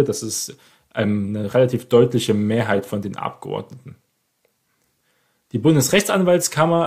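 Speech recording with no technical faults to report.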